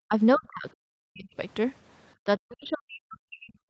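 The speech drops out hard at 0.07 to 0.14 s, again from 0.36 to 1.34 s, and from 2.25 s to the end, sinking by something like 40 dB. It's likely speech suppressed in double talk: the echo canceller mistook the talker for far-end echo and clamped down.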